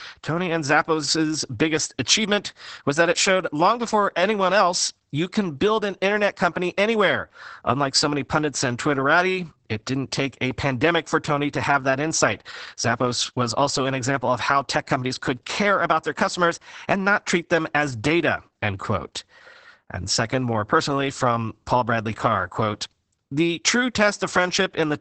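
Throughout, low-bitrate Opus voice compression in SILK mode, apparently around 10 kbps, strips everything above 8.7 kHz, leaving muffled, hoarse, slightly robotic speech.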